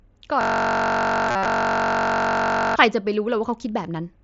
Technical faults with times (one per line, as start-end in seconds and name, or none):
0.41-2.76 system hang loop
1.29-1.45 concealed Bluetooth headset packet loss